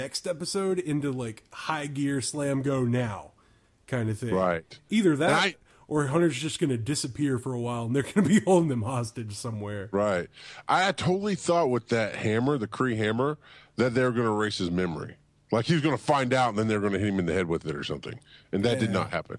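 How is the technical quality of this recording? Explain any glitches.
The recording shows no technical glitches: the signal stays continuous and intact throughout, with nothing that needs explaining.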